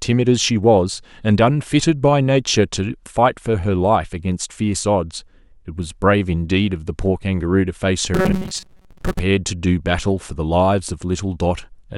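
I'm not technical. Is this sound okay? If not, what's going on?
No. From 8.14 to 9.20 s the speech turns into a flat, metallic buzz pitched at 188 Hz while still roughly tracking the words. This is robotic sound from repeated short buffers. The likely cause is audio arriving too slowly, so the software kept replaying a tiny slice of about 5 ms and skipped the real sound. Around half of that stretch is filler rather than actual speech.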